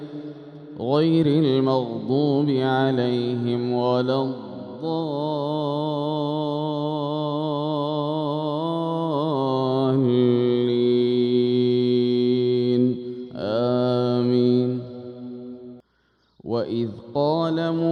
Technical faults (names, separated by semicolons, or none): none